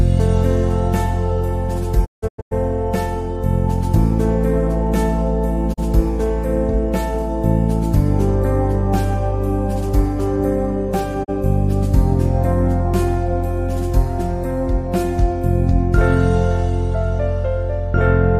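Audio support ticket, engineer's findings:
Digital broadcast dropout: sound fades to silence within 20 ms, in short holes at 2.04–2.53 s (longest 160 ms), then single brief gaps at 5.72–5.80 s and 11.23–11.30 s. The receiver mutes on failed or missing frames, and that audio is lost.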